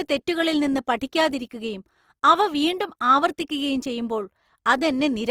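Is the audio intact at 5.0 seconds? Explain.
No. At 5.0 seconds, as across the whole speech clip, Opus compression damage is plainly audible, most likely from coding at a low rate around 24 kbps in Opus's music mode. With too few bits, the encoder keeps each band's energy but fills the fine detail with noise or folded copies of lower bands, so tonal parts turn grainy and rough. On a spectrogram the full bandwidth stays present with few holes, but harmonics look smeared and speckled with noise.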